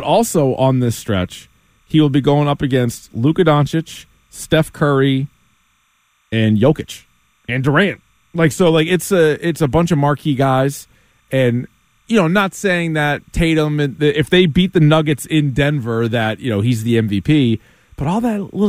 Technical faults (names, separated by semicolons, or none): timecode bleed